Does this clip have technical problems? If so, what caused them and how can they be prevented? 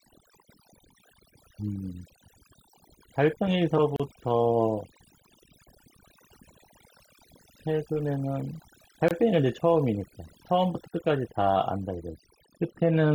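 Yes. Overdone noise removal runs through the whole clip. The reduction was set so strong that frequency bands near the noise estimate were pulled down or switched off, taking quiet parts of the speech with them. The background is near silence with twinkling specks. On a spectrogram the floor looks almost empty, scattered with isolated dots, and the speech has holes in its weaker bands. Use a gentler reduction amount and check the result on the quietest passages.

There are two gaps at joins of encoded pieces: at 3.96 to 4.00 s (about 34 ms) and at 9.08 to 9.11 s (about 24 ms). Each piece carried its encoder's start delay and last-frame padding into the join, so the sound stops abruptly and then resumes where it left off. A waveform shows a short flat line or deep dip with smeared edges. Encode the material as one continuous piece, or trim each piece's delay and padding before joining.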